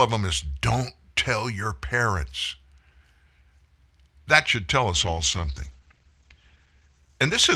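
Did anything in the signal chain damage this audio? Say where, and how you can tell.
Yes: a call bitrate drop in the codec from 4.95 s after "should tell" to the end, 48 to 12 kbps. Coarse, muffled sound capped at 8 kHz, without packet-loss gaps.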